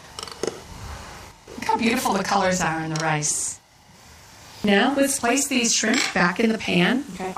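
Running through the whole clip, the sound carries a channel delay (doubling): one channel arrives 40 ms late, and when both are summed to mono the late copy sits at equal level as a distinct doubled image, like a tight slap echo following each event.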